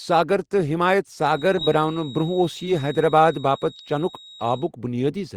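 From 1.18 to 4.71 s a feedback whistle sits near 3.8 kHz, roughly 20 dB below the speech. It is likely a speaker-to-microphone loop hovering at feedback, and shows as a steady horizontal spectrogram line.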